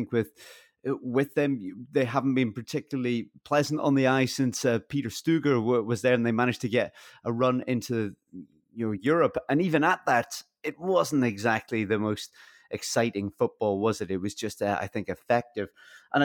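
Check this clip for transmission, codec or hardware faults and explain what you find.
Nothing here points to a transmission, codec or hardware problem, so there's nothing to flag in this speech recording.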